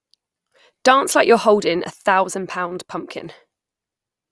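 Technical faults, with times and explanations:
Nothing technical goes wrong anywhere in this bit of speech, so there's nothing to flag here.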